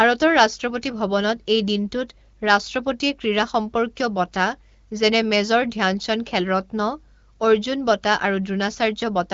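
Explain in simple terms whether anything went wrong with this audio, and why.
Nothing stood out on listening to this speech clip, which has the slightly narrowed sound expected of a wideband phone call (HD Voice) but nothing that points to a problem.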